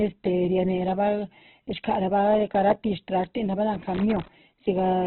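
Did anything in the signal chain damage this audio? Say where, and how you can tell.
Yes. Throughout the clip, speech stops dead at 4.2 kHz and sounds rough, grainy and heavily degraded. This is likely Opus compression at the codec stage, narrowed to narrowband at a very low rate near 8 kbps. A spectrogram shows a flat ceiling with noisy, smeared bands beneath.

From 3.74 to 4.28 s, an irregular burst of scratching sits on the signal: loose connector crackle in the analogue wiring. A worn contact making and breaking chops the line. The waveform shows scattered sharp spikes and dropouts, and the spectrogram shows broadband vertical streaks.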